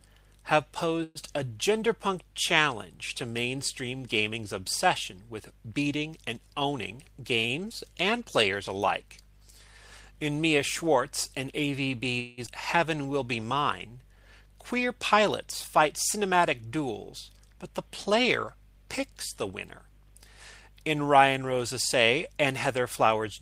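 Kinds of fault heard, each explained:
call audio freeze: At 1.03 to 1.18 s and 12.19 to 12.41 s the sound hangs as a fading buzzy continuation, likely because packets stalled and the jitter buffer ran dry. It then resumes where it stopped, with nothing lost, adding 119 ms and 181 ms of delay. On a spectrogram the last spectrum smears flat, then the original pattern resumes.
jitter buffer speed-up: From 6.46 to 8.13 s the buffer sheds surplus delay by cutting pitch-period-sized slices, playing at about 107% speed and removing roughly 150 ms. From 14.99 to 18.15 s it runs at 103%, trimming roughly 100 ms. The first stretch feels hurried but keeps its pitch. On a spectrogram, harmonics stay level while events arrive compressed in time.
skip ahead: Just after the second freeze, around 12.46 to 12.50 s, playback jumps forward, so roughly a tenth of a second of audio never plays. Only a 9 ms bridge joins the two sides. 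On a waveform this shows as an abrupt splice, where the envelope changes suddenly with no gap between.
jitter buffer slow-down: From 12.96 to 14.24 s the receiver rebuilds its reserve by repeating single pitch periods, running at 92% speed and adding 112 ms. Sounds are drawn out at the same pitch. A spectrogram shows stretched, repetitive harmonic segments with unchanged frequency spacing.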